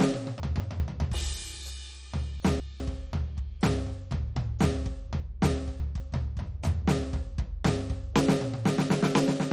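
From start to end the music is dull and gurgly, with granular grit, likely MP2 compression at a low rate around 56 kbps. The spectrogram is empty above 13.8 kHz, and the upper bands flicker on and off in blocky patches.

At 0.4–0.8 s and again at 2.4–2.8 s, the chunks are out of order: a 200 ms chunk plays one slot late, swapping with its neighbour. At 5.2–6.0 s a chunk arrives three slots late. Each spot sounds jumbled. On the waveform these joins appear as abrupt discontinuities.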